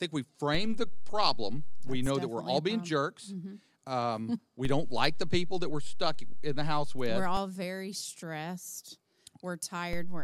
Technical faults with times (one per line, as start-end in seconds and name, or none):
0.55-2.06 DC step
4.65-7.37 DC step
9.93-10.23 DC step